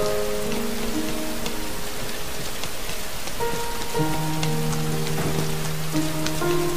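No technical faults are audible.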